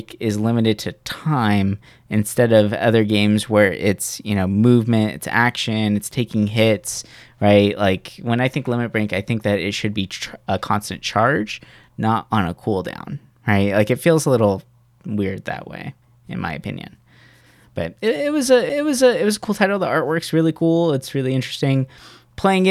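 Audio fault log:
18.69 s, CD skip: after "but it", a brief mute of a few milliseconds, then "it was a cool" resumes from another point in the spiral. Unlike a plain dropout, the audio jumps position.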